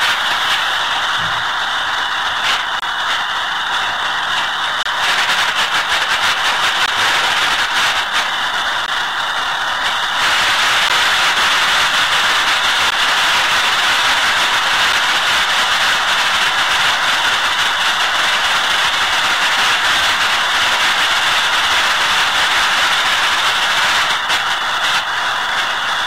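Gap between stream segments: the time stamps of consecutive 2-second segments of this sound recording leave small holes, which the player fills with silence. Hard-edged dropouts of 14 to 27 ms interrupt the sound at 2.80–2.83 s, 4.83–4.86 s, 6.86 s, 8.86 s, 10.89 s and 12.90 s, with nothing actually lost.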